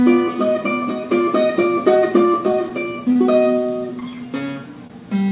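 Audio carried over a narrowband call path, with nothing above 4 kHz, which fits a G.711 A-law link, shows a run of brief smears at 2.52 s, 3.12 to 3.17 s, 3.63 to 3.67 s, and 4.00 to 4.03 s. Each time the sound blurs for a moment and then picks up again. These are short concealed packet losses. Each gap, about 20 ms of missing audio, was covered by extending the preceding sound, continued from its pitch or as shaped noise, for between 12 and 27 ms before it was crossfaded back into the real signal.

Right after the last of these, from 4.04 to 4.28 s, the audio drags at about 86% speed with its pitch unchanged, sounding drawn out. This is a jitter buffer slow-down. The receiver rebuilt its reserve by repeating single pitch periods and fragments of quiet, stretching that stretch by 41 ms.

At 4.87 to 4.92 s one sound is held too long with a slight buzz or dip, yet nothing is skipped. This is a short stall from a late packet. 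The buffer ran dry, so the last sound was extended for 25 ms until the packet turned up, and playback then resumed from the same point, 25 ms later than before.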